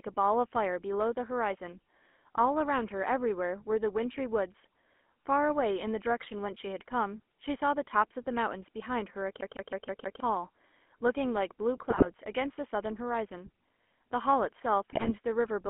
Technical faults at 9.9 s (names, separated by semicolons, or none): GSM full-rate codec; CD stuck on one turn